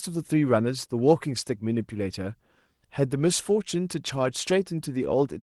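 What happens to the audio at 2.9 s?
Nothing goes wrong at 2.9 s: the speech carries on intact there, with no dropout, click or other disturbance.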